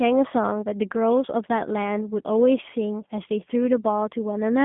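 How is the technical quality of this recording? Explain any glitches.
Technical quality is limited by G.729 codec damage throughout. The speech is band-limited to roughly 150 Hz to 3.5 kHz. It is rebuilt from a filter, pitch predictor and sparse pulses, which fits 8 kbit/s. It sounds rough and synthetic.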